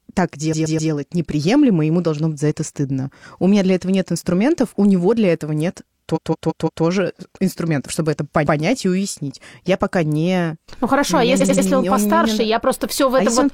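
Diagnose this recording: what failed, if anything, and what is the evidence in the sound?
Repeated frames, at the codec or storage stage. A short block of sound plays again at 0.49, 6.12, 8.43 and 11.37 s, in blocks of 128, 170.7, 128 and 85.3 ms. Each stutter stretches the speech. The longest adds 0.68 s before "инструментов чтобы это".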